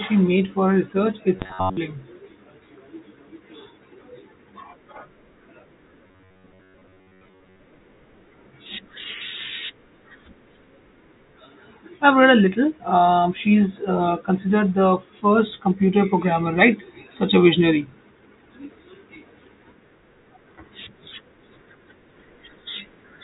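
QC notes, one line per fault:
1.37–1.77 s and 6.07–7.61 s: robotic sound from repeated short buffers. A rigid metallic buzz near 94 Hz, likely from a 10.7 ms block replayed over most incoming audio.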